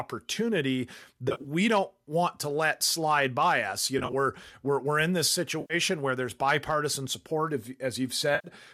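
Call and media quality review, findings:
AAC frame loss with concealment, four events. Decoder refills gaps from last good spectrum with randomized phase, giving brief smeared, phasey patches and no dropout to silence. Gap pattern fits 10 ms low-delay AAC frames, likely AAC-ELD.

1.29 to 1.47 s, before "don't want to let": about 90 ms missing, scattered over 160 ms, runs up to roughly 30 ms.

3.99 to 4.13 s, before "we're we're in this": about 70 ms over 140 ms.

5.61 to 5.74 s, between "we're we're in this" and "where there's bipartisan support": about 90 ms concealed.

8.35 to 8.48 s: about 90 ms concealed, same smear.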